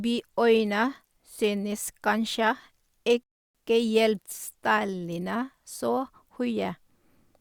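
At 3.23 s the speech stops dead in a rebuffering stall. The player ran out of downloaded audio and waited for more. Silence holds until 3.55 s, about 0.31 s. The speech then resumes exactly where it broke off. Nothing is lost, but the pause is added.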